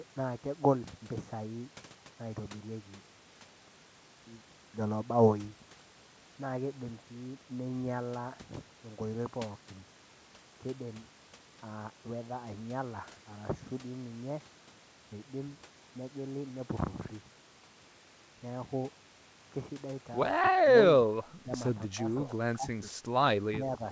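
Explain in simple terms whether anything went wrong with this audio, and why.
Near the end, the echo canceller likely mistook speech for echo while both sides talked at once, and turned it down. This is speech suppressed in double talk: the voice dips or briefly drops out at 20.39–21.07, 21.43–21.47, 21.87–21.99, 22.26–22.34, 22.56–22.92 and 23.51–23.81 seconds.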